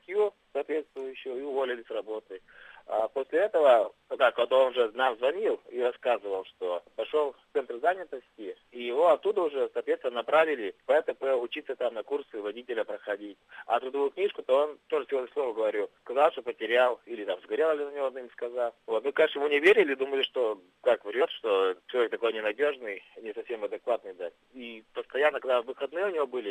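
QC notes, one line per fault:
21.18–21.21 s: compressed frames skipped. The audio jumps forward by about 20 ms, consistent with one or more coded frames missing or rejected as damaged by the decoder.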